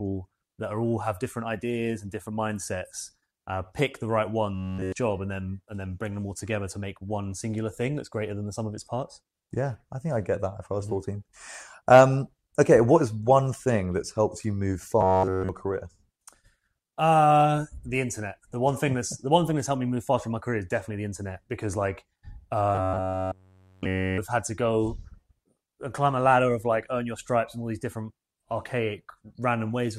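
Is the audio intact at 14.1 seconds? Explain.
Yes, the audio is intact at 14.1 seconds, with no dropout, glitch or other fault audible at that point.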